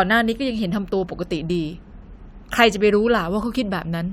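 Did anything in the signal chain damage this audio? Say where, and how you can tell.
No, nothing in this speech recording stood out on listening as damage from any stage of the signal chain.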